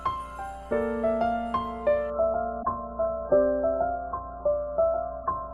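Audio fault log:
throughout: mains hum. A steady low tone at 60 Hz, with a few low harmonics, sits under the whole clip at roughly 20 dB below the sound. A ground loop or a nearby transformer is letting the power line leak into the signal path. It stays fixed in pitch and level from start to finish, and its smooth, rounded quality without a bright rasp sets it apart from a harsher buzz.
2.10 s to 5.53 s: adaptive stream at a lower bitrate. At 2.10 s the quality falls off in an instant and stays down to the end. Nothing is left above 1.7 kHz, so the sound turns dull and muffled, with the smeary, watery codec artefacts of heavy compression. This fits a stream switching from about 96 kbit/s AAC to a version near 8 kbit/s when the connection slowed. Unlike a dropout there is no gap or silence, just a sudden step down in fidelity.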